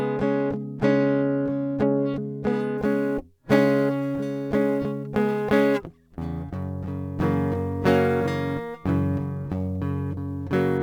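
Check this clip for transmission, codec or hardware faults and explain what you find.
Yes, there is one hardware fault in this music. From 2.78 s to 10.78 s there is sample clock jitter. The converter's clock wanders by several microseconds, so samples land early or late. Steep, bright passages suffer most. A fine hiss and roughness sits roughly 35 dB below the music.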